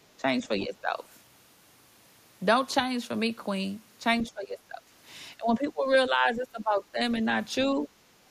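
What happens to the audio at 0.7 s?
At 0.7 s the speech is caught in speech suppressed in double talk, running from 0.42 to 1.01 s. The level dips by roughly 10 dB, for around 400 ms in all, likely because an echo canceller could not separate near-end talk from overlapping loudspeaker echo and turned both down. The waveform shows notched envelope drops.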